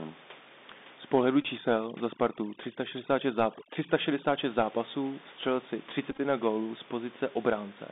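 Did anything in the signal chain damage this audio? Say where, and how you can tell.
Yes. At the codec stage, the whole clip passed through the Bluetooth CVSD headset codec. The sound is confined to roughly 200 Hz to 3.7 kHz, which fits 64 kbit/s CVSD. Its one-bit up/down steps leave a grainy hiss under the speech, scratchy sibilants, and gritty distortion where loud high content outruns the step size.

On the wireless link, there are two Bluetooth headset packet repeats. From 1.42 to 1.46 s, about 19 ms of audio was lost, which fits around five dropped packets. The chip re-decoded the last good packet, and the run of repeats every 3.75 ms produces a short buzz near 267 Hz. The second, from 6.11 to 6.20 s, falls between "zápasů vstřelil si" and "na gólu z". Here 45 ms was lost in short bursts over 75 ms, with the longest run roughly 10 ms, giving brief buzzy ticks.

In call processing, overdone noise removal runs from 1.58 to 4.39 s, ending just before "zápasů vstřelil si". 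The suppressor pushes bands near its noise estimate down hard. The room noise, about 20 dB below the speech elsewhere, drops and breaks up into twinkling specks, and quieter parts of the speech go with it.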